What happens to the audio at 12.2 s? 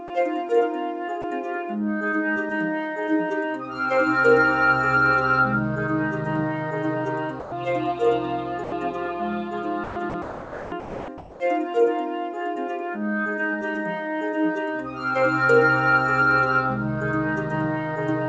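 Nothing goes wrong at 12.2 s; the audio carries on intact through that moment, with the same top end that stops around 8 kHz, as expected from the wideband call codec it passed through.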